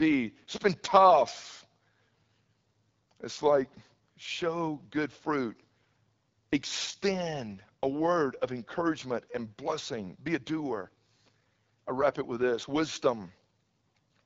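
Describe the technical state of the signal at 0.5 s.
At 0.5 s the speech is going through the AMR wideband (HD Voice) codec, as it does for the whole clip. At 8.85 kbit/s, one of its lowest rates, the pulse-driven vocal tract model leaves the speech rough and raspy. Nothing comes through above about 7 kHz.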